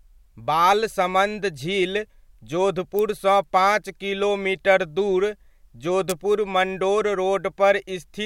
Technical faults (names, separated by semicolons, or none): electrical switching spike